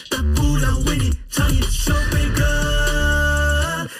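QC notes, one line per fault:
Throughout: channel delay (comb filtering). One channel trails the other by about 0.7 ms, and summing to mono cancels shared content at evenly spaced frequencies, the first near 700 Hz, then repeating upward. The fixed notches give a hollow, phasey sound.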